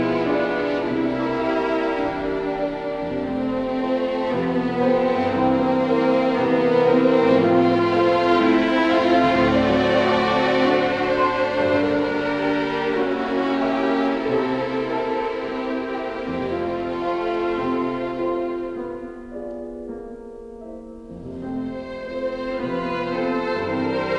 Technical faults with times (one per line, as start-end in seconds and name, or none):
none